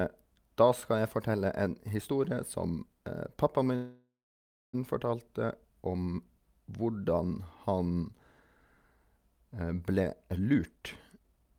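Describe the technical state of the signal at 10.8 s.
Jitter buffer speed-up, running from 9.99 s to 11.56 s and so covering 10.8 s. The receiver's buffer had built up more audio than its target, so it trimmed short slices of one or a few pitch periods over and over to draw the backlog down, about half a second in total. The speech plays at roughly 132 % speed with its pitch unchanged, giving a hurried, clipped delivery through the end of the clip.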